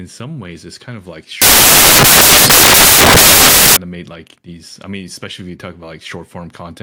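At 1.42 s, right after "it's kind of like", the speech is replaced by loud, harsh broadband noise until 3.77 s, where it resumes with "made like these I". This is samples built from the wrong bytes. Each sample's bytes were assembled in the wrong order or at the wrong offset. The rapidly changing low bits then became the most significant part of every value. The result is a harsh hiss.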